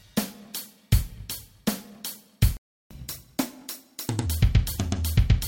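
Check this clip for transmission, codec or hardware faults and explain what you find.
There are two playback faults, one following directly from the other.

A playback stall runs from 2.57 to 2.91 s: the sound stops mid-flow for about 0.34 s, likely because the player ran short of data or its thread was blocked. The waveform flatlines and the spectrogram shows a clean vertical blank band.

Catch-up at higher speed follows from 2.91 to 4.26 s: the player works off its backlog at 1.25 times speed, raising the pitch by roughly four semitones before settling back. On a spectrogram the harmonics shift upward and events sit closer together.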